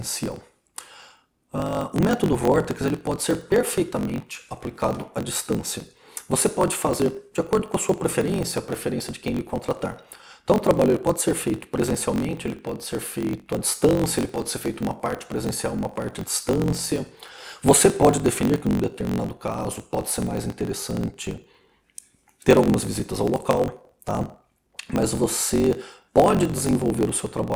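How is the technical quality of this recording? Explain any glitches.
Not great: one fault runs through the whole clip. Block size mismatch (truncated): block tails get dropped, which fits a 1024-sample read, giving a steady 46.9 Hz buzz and sound running 1.12 times fast at near-normal pitch.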